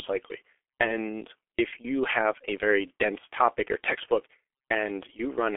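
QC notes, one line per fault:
Throughout, G.723.1 codec: speech band-limited to 300 Hz to 3.4 kHz, heavily muffled and hoarse, consonants smeared by slow 30 ms frame updates, which fits a 6.3 kbit/s mode.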